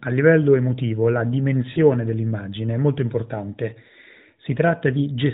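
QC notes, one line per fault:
1.72–1.79 s, lost AMR speech frames: after "livello emotivo la", about 40 ms smears into a drawn-out, fading warble, fitting two concealed frames, not a hard silent dropout.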